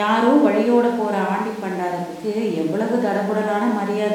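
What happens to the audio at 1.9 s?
Nothing goes wrong at 1.9 s: the speech carries straight through that moment without any dropout, click, glitch or other fault.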